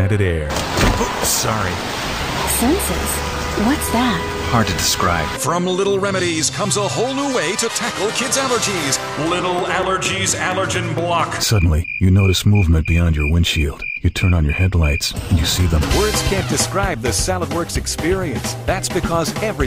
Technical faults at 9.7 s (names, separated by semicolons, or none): train of clicks